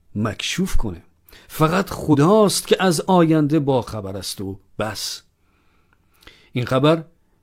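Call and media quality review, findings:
Compressed frames skipped at 2.09–2.16 s. About 50 ms of speech lost. Decoder dropped missing or damaged frames.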